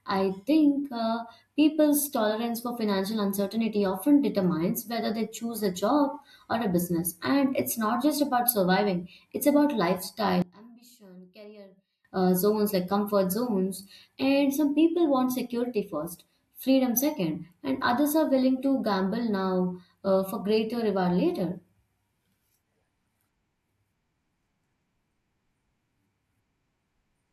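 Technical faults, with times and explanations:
10.42 to 12.05 s, one channel inverted: the speech suddenly drops by about 24 dB and turns faint. One stereo side has likely flipped polarity. The shared centre content cancels in the mono sum. Only the small difference between channels remains.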